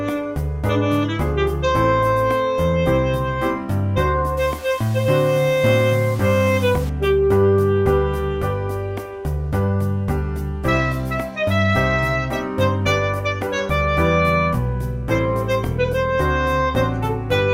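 Low bit depth without dither appears from 4.37 to 6.90 s, where the sound turns grainy and rough. This is likely from the signal being rounded to about 6 bits with no dither added, so each sample snaps to one of only a few dozen levels. The rounding error tracks the waveform instead of spreading as steady hiss, and it sits roughly 20 dB below the signal. The result is a gritty distortion that shifts as the sound changes.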